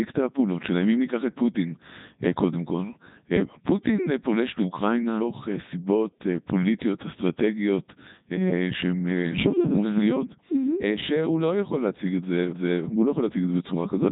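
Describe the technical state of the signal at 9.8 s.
At 9.8 s the speech is passing through the Codec 2 vocoder, as it does for the whole clip. Only pitch, voicing, energy and a coarse spectral envelope survive, and the decoder rebuilds the voice from sine waves, so it sounds robotic and buzzy, with nothing above 3.8 kHz, consistent with the 3.2 kbit/s mode. Unlike a waveform codec's swirly or smeared artefacts, the original waveform is replaced outright, not just degraded.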